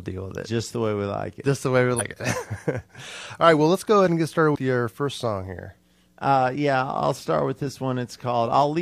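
At 1.95 to 2.01 s and again at 4.51 to 4.56 s, compressed frames are skipped: the decoder drops whole blocks of the encoded stream, so the speech jumps forward, by about a tenth of a second first and about a fifth later, consistent with a couple and then a handful of 46.4 ms frames. The waveform shows an abrupt envelope discontinuity, and the spectrogram a brief vertical smudge where formant tracks jump.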